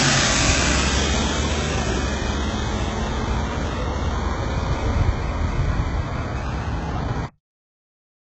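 Throughout, the encoding likely passed through HE-AAC compression at a very low rate, consistent with about 8 kbps, where only the lower band is truly coded and the treble is patched in from copied lower bands. Nothing reaches above 8 kHz, and the top sounds gritty and metallic.

At 7.26 s there is a cut-off end: the final buffers were never written or played out, so playback stops partway through a sound and drops straight to digital silence, with no natural decay, for the remaining second.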